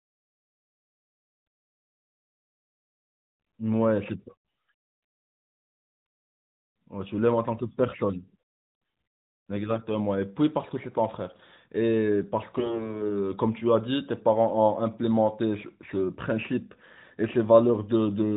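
Speech over a narrowband AMR mobile link, whose 4 kHz ceiling and light coding fit 12.2 kbps, suffers AMR bit errors from 9.71 to 9.87 s and from 12.58 to 12.98 s. Corrupted unprotected bits, a few percent in the first burst and more in the second, misplace excitation pulses and distort gain, so the voice turns hoarse and gargly.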